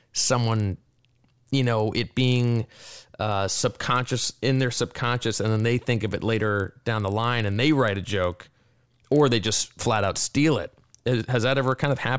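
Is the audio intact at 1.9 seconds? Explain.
No. At 1.9 seconds the speech carries the same fault that runs through the whole clip: a resampler restarted on every block. Each 40 ms block was converted on its own, which fits a 44.1 kHz to 16 kHz rate change, so the filter lacked real neighbouring samples at every block edge. The resulting edge errors come 25 times a second, heard as a steady buzz at 25 Hz that rides on the speech and vanishes in silence.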